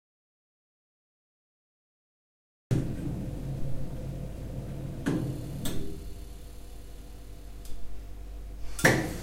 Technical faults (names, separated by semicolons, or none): audio dropout to silence